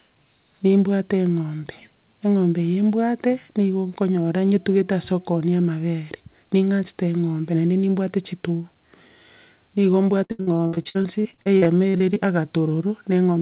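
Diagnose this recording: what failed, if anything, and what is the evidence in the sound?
From 10.24 s to 12.18 s the speech turns choppy, as fragments drop out and smeared, stretched sound stands in for them. This is repeated packet loss (robotic sound) at the network stage: many short holes open one after another, the longest around 73 ms. The jitter buffer's concealment keeps extending the last received sound to fill each hole, so about a third of that stretch is patched rather than real. The dull, telephone-band sound throughout, with nothing above 4 kHz, fits the narrowband call codec on the path.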